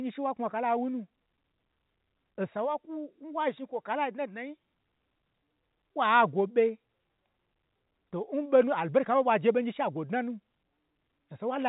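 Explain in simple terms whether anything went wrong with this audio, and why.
Nothing went wrong with the recording: it is ordinary telephone-quality speech, carried by the standard G.711 telephone coding, which keeps only the sound below about 3.8 kHz, so it has the familiar narrow, phone-line character without any errors.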